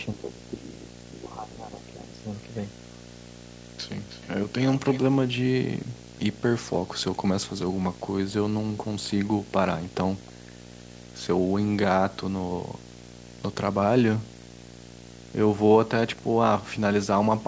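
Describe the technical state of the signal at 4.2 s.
At 4.2 s you're right in the middle of a short echo leak running from 4.09 to 4.28 s: a faint, delayed copy of the speech arrives about 314 ms behind, well down in level. Most likely the far end's speakerphone echo canceller let a scrap of its loudspeaker pickup slip back through.

Under that, the video or display buzz runs through the whole clip: a 59.94 Hz field-rate buzz with hash on top and a 15.7 kHz line-rate tone, sitting roughly 20 dB below the speech, from a screen or video cable coupling into the audio.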